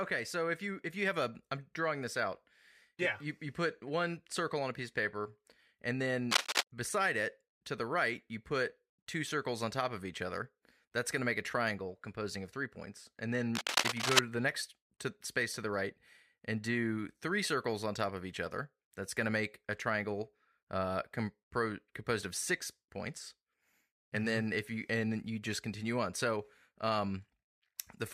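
Scratchy, rustling bursts cut across the speech from 6.31 to 6.63 s, between "piece of paper and" and "beside it to the", and again from 13.55 to 14.19 s, just before "to the next to", rising somewhat above the voice. This is cable scratch noise, likely from a worn connector whose contact resistance jumps as it moves.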